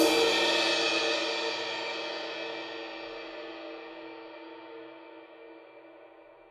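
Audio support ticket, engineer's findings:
No audible faults found.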